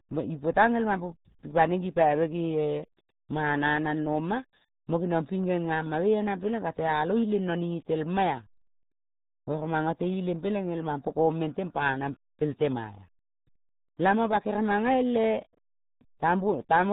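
RealAudio 14.4 codec damage runs from start to finish: the speech is squeezed through a dial-up-era coder whose heavy compression, fitting roughly 8 kbit/s, discards everything above 3.8 kHz, leaving the voice muffled, dull and gargly.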